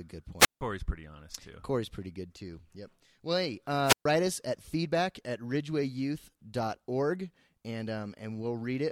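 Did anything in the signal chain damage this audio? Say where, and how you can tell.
Yes, a wireless microphone squelch dropout in the analogue radio link, at 0.39–0.61 s before "pretty honest too" and 3.84–4.06 s before "us at feedback at". The fading signal brings up hiss until squelch mutes the output for 161 ms and 129 ms. A spectrogram shows broadband static, then a blank column.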